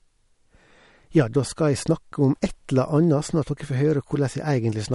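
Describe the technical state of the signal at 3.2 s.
At 3.2 s the speech carries plainly audible MP3 compression damage, present across the whole clip rather than at that moment alone. Nothing reaches above about 11.2 kHz, a hard treble ceiling that the encoder likely imposed when starved of bits, which fits a bitrate in the region of 47 kbps. Weak frequency lines are being zeroed and restored from frame to frame, giving a watery, swirly texture, metallic chirping on s sounds and smeared consonant attacks.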